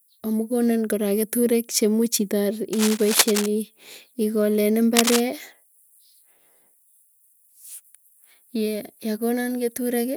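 Just after "kora keturek chemuch itar", from 2.73 to 3.48 s, dense ragged crackle runs a little below the speech; again from 4.96 to 5.22 s at about speech level. This is cable scratch noise, likely a worn connector shifting and briefly varying its contact resistance.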